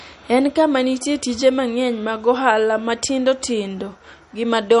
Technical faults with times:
0.00-4.80 MP3 compression

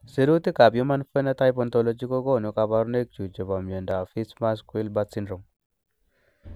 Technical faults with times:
3.91 block of digital silence

